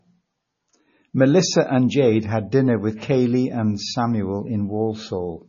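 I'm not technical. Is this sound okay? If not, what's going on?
No. From start to finish the speech sounds dull, watery and swirly, with nothing above 6.9 kHz. That is most likely heavy MP3 compression: the encoder cut the treble and dropped quieter details it judged unimportant, leaving this muffled, fluttery sound.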